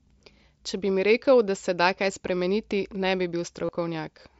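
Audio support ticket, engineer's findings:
Brief buzzy held tone at 3.66–3.69 s, about 30 ms, slight warble as the sound resumes. Concealed Bluetooth headset packet loss: a short run of lost packets, consistent with about four frames, bridged by repeating the best-matching recent waveform. The mSBC wideband link carries audio to 8 kHz with light grain.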